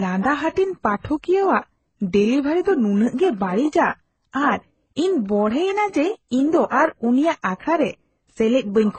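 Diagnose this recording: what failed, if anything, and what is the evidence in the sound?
Transcoding between lossy codecs, throughout the speech: a codec-stage fault, likely an HE-AAC pass followed by MP3 encoding. Nothing sounds above about 8.3 kHz, and two distinct artefact types sit together, consistent with a 12 kbit/s HE-AAC stage re-encoded at roughly 32 kbit/s MP3. The second encoder spends bits on the first's damage and adds its own.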